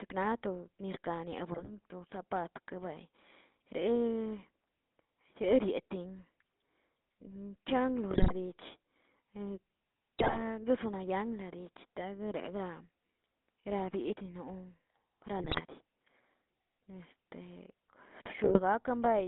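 The whole clip of speech carries the GSM full-rate codec's buzzy, gravelly roughness, band-limited to roughly 200 Hz to 3.6 kHz, which fits a 13 kbps GSM stream. GSM bit errors hit around 1.52–1.71, 8.10–8.33, 10.19–10.42, 15.38–15.61 and 18.44–18.60 s, where corrupted frame parameters twist the sound into squawks and gargling pops.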